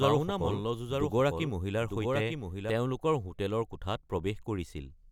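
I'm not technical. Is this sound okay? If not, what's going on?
No. From the start until 2.7 s there's a doubled audio track: the speech plays twice, a second copy trailing about a second behind, a bit quieter. Unlike an echo, it doesn't fade or sound roomy, and it cuts off abruptly, likely from a second, slower recording path.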